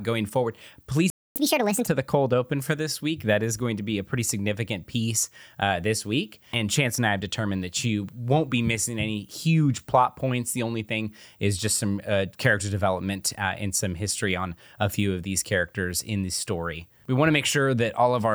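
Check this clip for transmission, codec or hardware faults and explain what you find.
Two related playback faults appear early in the speech, both near the start of the clip.

Playback stall, 1.10 to 1.36 s. The speech drops out for about 258 ms, likely because the player ran short of data.

Catch-up at higher speed, 1.36 to 1.87 s. The backlog plays at 1.5 times normal speed, so pitch jumps by roughly seven semitones before settling.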